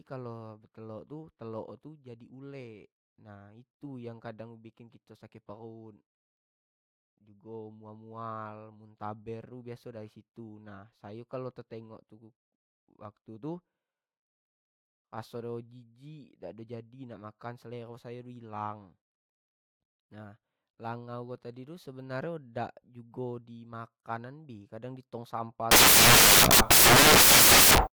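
At 25.71 s the speech gives way to loud broadband noise that lasts until 27.87 s. These are samples built from the wrong bytes. The reader assembled each sample with its bytes misaligned or swapped. The rapidly changing low bits landed in the high position. Small, random detail therefore became the bulk of every value. The result is a harsh, full-band hiss.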